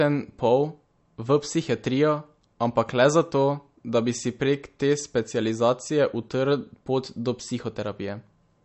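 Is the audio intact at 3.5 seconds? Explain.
No. MP3 compression damage runs through the whole clip, including 3.5 seconds. Nothing is heard above 8.1 kHz. Weak frequency lines flicker from frame to frame, giving the speech a watery, swirly sound. This likely comes from a starved encoder, which fits about 40 kbps.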